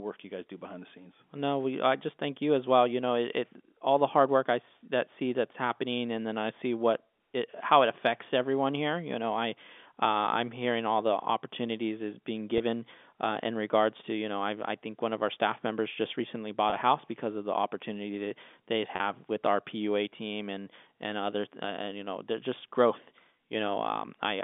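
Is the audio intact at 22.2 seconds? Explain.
Yes, the speech at 22.2 seconds is intact, with no fault at that moment beyond the narrow telephone band of the G.711 line it travels over.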